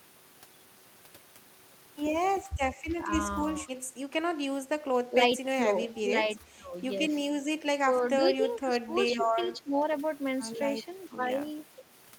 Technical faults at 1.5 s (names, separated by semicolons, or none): none